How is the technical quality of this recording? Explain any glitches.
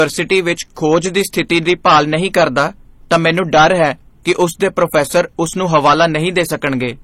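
The technical quality is poor: two faults run through the whole speech clip, from start to finish.

Hard clipping is present throughout. The signal is driven about 12 dB past what the chain can pass, so a few percent of samples have their peaks sliced flat. Those squared tops add high harmonics, heard as harsh fuzz on loud syllables. Unlike codec distortion, the fuzz follows level and vanishes on quiet passages.

The second fault sounds like transcoding between lossy codecs, likely an MP3 at around 35 kbit/s re-encoded as HE-AAC at around 32 kbit/s. Nothing survives above 16.2 kHz. The artefacts of both codecs sit together, and unlike a single low-bitrate encode, the earlier smearing is itself re-coded and roughened.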